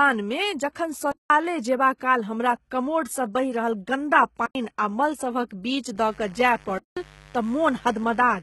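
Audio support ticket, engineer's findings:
Speech band sounds coded at low rate throughout: treble present but synthetic, sibilants gritty and metallic, harmonics misaligned above the crossover, nothing above 11.8 kHz. Heavy codec damage. Likely HE-AAC compression at a rate that fits roughly 16 kbps; spectral band replication copies lower bands upward under a coarse envelope instead of coding the real treble.

Block of digital silence, three events: 1.12 to 1.30 s (186 ms), 4.46 to 4.55 s (93 ms), 6.78 to 6.97 s (186 ms). Hard cut out and back, no fade, so each reads as a short hole. Lengths fit 8192- and 4096-sample buffers not filled in time, or invalid values zeroed.

Mains buzz from 5.94 s to the end: steady raspy buzz on a 50 Hz fundamental, about 25 dB below the speech, harmonics extending into the kilohertz range. Probable source is a dimmer, a rectifier or a missing shield injecting switching spikes twice per mains cycle.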